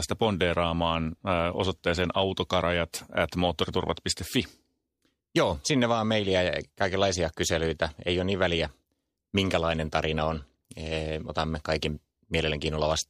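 No technical faults can be heard anywhere in this speech clip.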